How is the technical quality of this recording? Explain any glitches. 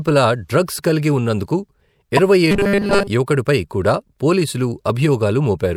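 The speech has two clear technical faults close together, near the middle.

From 2.17 to 2.19 s a sharp, loud blip cuts through. This is a corrupt frame decoded: damaged bits in one compressed frame were played anyway, so misread values threw energy into the wrong frequencies for that frame's brief duration.

From 2.51 to 3.08 s the speech turns into a rigid, metallic buzz at 200 Hz that only loosely tracks the words. This is robotic sound from repeated short buffers, likely caused by new audio arriving too slowly. A 5 ms stretch is looped in its place, and most of the real audio in that span appears to be skipped.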